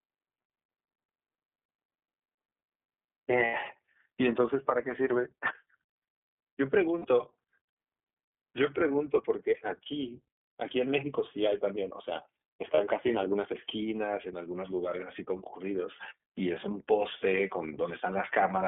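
Throughout the speech, the iLBC codec limits the sound to a telephone band of roughly 200 Hz to 3.4 kHz and gives it a plainly audible rough, synthetic edge. The grain fits iLBC's 30 ms frame mode, and it is steady rather than varying over time, which separates it from a fluctuating adaptive codec.

Lost iLBC frames occur at 3.44 to 3.55 s (90 ms), 6.98 to 7.06 s (60 ms) and 12.74 to 12.79 s (30 ms). The decoder fills each gap by repeating the last pitch cycle mixed with noise, so you hear a brief held, buzzy vowel instead of silence. Clean sound returns immediately afterward, with no smeared recovery.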